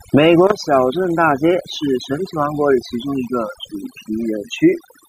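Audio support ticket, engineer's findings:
Overdone noise removal, throughout. Background dropped, with twinkling specks. Denoiser set too aggressive, zeroing bands near its noise estimate and quiet speech detail with them. Unlike a gate, bands vanish individually rather than whole signal cutting.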